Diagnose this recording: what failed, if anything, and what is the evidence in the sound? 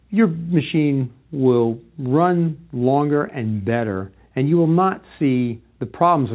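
Nothing stood out on listening, and the absence of anything above 4 kHz is what a narrowband call path such as G.711 mu-law would produce rather than a sign of failure.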